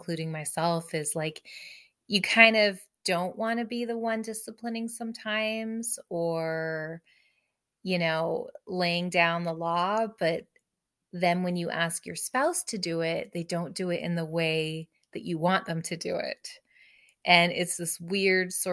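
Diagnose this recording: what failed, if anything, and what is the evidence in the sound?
Nothing failed; no stage leaves any audible trace.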